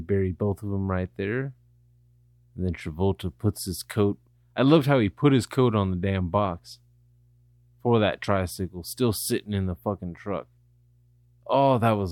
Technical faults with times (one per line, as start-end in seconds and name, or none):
0.00-12.12 mains hum